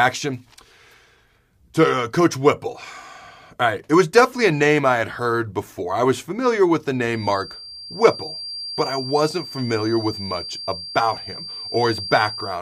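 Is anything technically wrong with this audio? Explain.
Yes. A feedback whistle runs through the speech from 7.09 s to the end of the clip at 12.61 s: a thin, steady tone near 4.7 kHz, sitting about 15 dB below the speech and swelling and fading slowly in level. The likely cause is acoustic coupling between a loudspeaker and the microphone, with loop gain held just at the feedback threshold at that frequency, so the tone sustains without building into a full howl.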